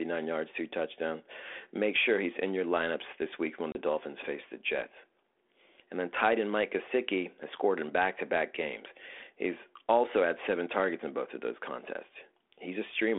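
At 3.72 to 3.78 s, just after "lineups this week when", packet loss on an ADPCM call leaves a hard-edged 30 ms silent hole. Unlike a simple dropout, the speech comes back slightly distorted while the decoder's predictor and step size fall back into step with the sender's.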